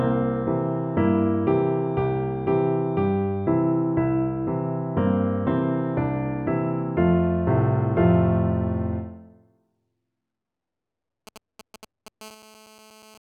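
GSM signalling bursts appear from 11.27 to 12.23 s as a galloping run of ticks and brief buzzes, roughly 20 dB below the audio. A nearby 2G phone exchanging control traffic sends short clusters of 217 Hz radio pulses, which the audio circuitry rectifies into audible clicks. GSM phone buzz then takes over from 12.23 to 13.18 s, a hard, raspy 217 Hz tone rich in harmonics at about 25 dB below the audio. It is steady because the phone has moved into a call and now transmits continuously at that burst rate, which the circuit again demodulates into sound.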